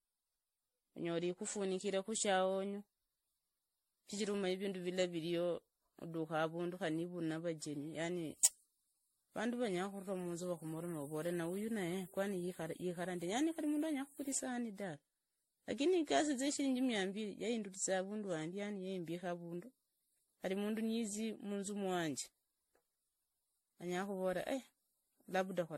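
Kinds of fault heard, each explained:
Generation loss: swirly, hollow, smeared speech with blurred attacks and nothing above 16.5 kHz, likely from roughly ten MP3 re-encodes somewhere around 60 kbit/s.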